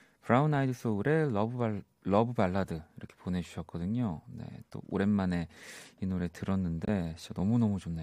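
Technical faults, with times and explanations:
6.83–6.89 s, corrupt frame muted: the speech drops abruptly into a 60 ms silent gap, consistent with roughly three 20 ms frames. Bit errors made those compressed frames undecodable, so the player substituted silence instead of audio. Timing is preserved, with speech resuming on schedule.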